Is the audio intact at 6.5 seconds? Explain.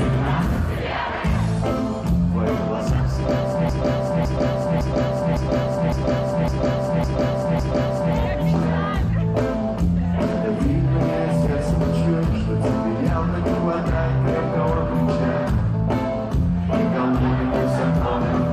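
No. From 3.69 to 8.15 s, a 557.3 ms block of compressed frames plays eight extra times, a repeated-frames stutter adding 4.46 s. On a spectrogram or waveform, 6.5 s sits inside identical tiles repeating every 557.3 ms.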